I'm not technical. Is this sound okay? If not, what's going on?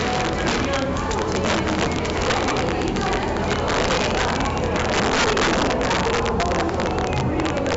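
No. Two faults run through the whole clip.

The first is integer overflow. On the loudest moments the level exceeds what the digital numbers can hold, and instead of stopping at the ceiling it wraps around to the opposite extreme. That causes harsh, violent cracks. Ordinary clipping would sound fuzzier and flattened, not this sharp.

The second is heavy 4-bit ADPCM compression. This old, very compact storage method records each sample only roughly. It leaves a gritty hiss that rises and falls with the sound, with rough edges on sudden attacks. Because nothing above about 7.7 kHz remains, the audio also sounds dull and muffled.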